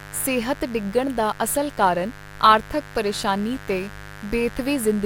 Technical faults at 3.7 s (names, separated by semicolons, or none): mains buzz